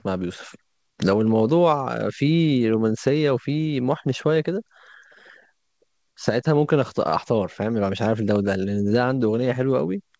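No technical faults can be heard anywhere in this speech.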